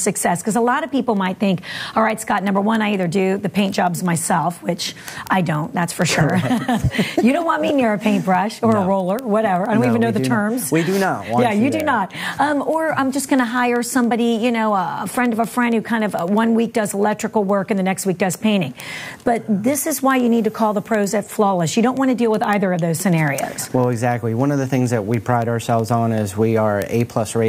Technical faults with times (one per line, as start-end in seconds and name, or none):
0.14-27.47 word clock ticks